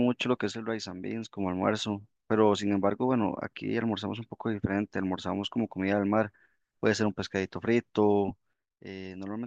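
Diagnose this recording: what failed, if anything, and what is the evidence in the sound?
Sudden gain jump at 0.51 s, where speech and background noise drop together by about 6 dB until 1.37 s, then again at 8.53 s, falling about 10 dB through the end. The likely cause is a digital gain change applied between consecutive samples without a ramp.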